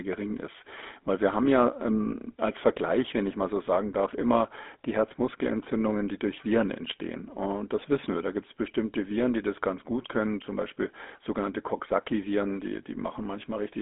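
From start to finish, the speech carries GSM full-rate codec damage, and it is plainly audible. The codec rebuilds each voice from a vocal-tract model driven by a sparse, regular pulse train. That coarse excitation gives a buzzy, gravelly roughness. The sound fits the 13 kbps full-rate coder. The band is telephone-narrow, from about 250 Hz to 3.5 kHz. Nothing reaches above 3.8 kHz, so the speech sounds thin and dull.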